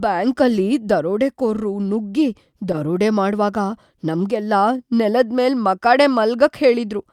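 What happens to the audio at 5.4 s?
Nothing goes wrong at 5.4 s: the speech carries on intact through that moment.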